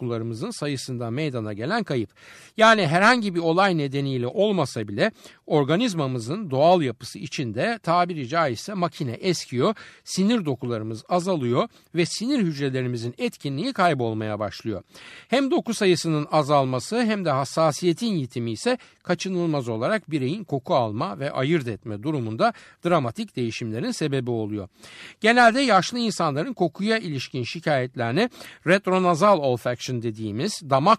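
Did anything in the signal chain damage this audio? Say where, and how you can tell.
Yes. At 4.83 s, right after "herhangi bir olay nedeniyle", a single sharp click cuts through the speech. It shows as a thin vertical line across the spectrum. This points to dropped samples, a few in a row, about 0.1 ms. The waveform jumps straight to a later value. The likely stage is the driver or buffer.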